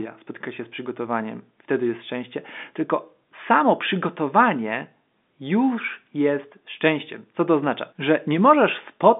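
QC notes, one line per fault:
No faults here: the speech just has the narrow telephone band of G.711 coding, which tops out around 3.7 kHz.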